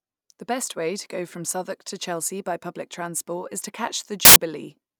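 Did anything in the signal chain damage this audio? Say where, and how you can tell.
Yes. There's a burst of samples built from the wrong bytes, from 4.25 to 4.36 s, about a tenth of a second of loud, harsh broadband noise. That points to the sample-format conversion stage: the bytes got misassembled, so the jittery low bits landed on top.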